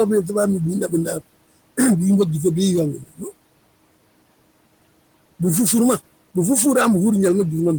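A speech recording with noise suppressor artifacts running throughout. The suppressor pulls steady background noise down by about 21 dB, frame by frame. The room noise, about 20 dB below the speech, dips between phrases and swells under them.

Speech is also cut by the noise suppressor twice. From 0.88 to 1.23 s, quiet parts drop by up to about 14 dB, roughly a tenth of a second in all. From 2.97 to 3.27 s, the drop reaches about 18 dB, over roughly a fifth of a second. The suppressor mistook soft speech for noise, so it sounds swallowed.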